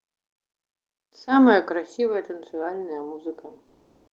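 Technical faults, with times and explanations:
3.67–4.13 s, comfort noise in place of the background: the natural background gives way to a steady, featureless hiss, shifted about 14 dB in level, likely from Opus discontinuous transmission. A spectrogram shows a smooth, uniform noise band, and the waveform a flat, even floor.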